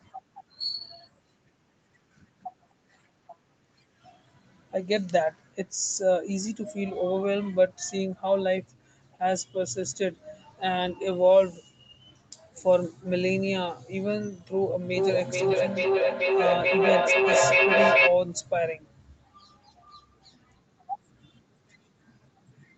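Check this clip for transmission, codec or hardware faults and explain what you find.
There is one fault, a feedback echo between two devices, from 14.82 to 18.22 s. Two devices in the same room were on the call, so one speaker's output looped back into the other's microphone, beyond either echo canceller's reach. The sound repeats roughly every 0.4 s, thinner and ringing, and builds to about 4 dB above the speech instead of fading.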